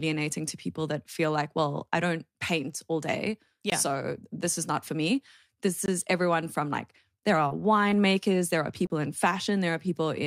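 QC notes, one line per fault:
3.70–3.72 s, 5.86–5.88 s and 8.87–8.90 s, block of digital silence: three short runs of samples drop to silence, 20 ms, 20 ms and 30 ms long, which points to the output buffer not being filled in time. Each cut into and out of silence is abrupt with no fade, leaving a brief hole. The 30 ms block is long enough to register as a momentary dropout.
7.35–9.88 s, scattered short gaps: around three small losses of packets spread over this stretch, the longest roughly 30 ms, totalling 80 ms of missing audio. The receiver concealed them by extending the preceding sound, with 180 ms of signal rebuilt around the holes and about 13 ms of extra duration added. The result is brief smears and hiccups, with only about 3% of the span concealed.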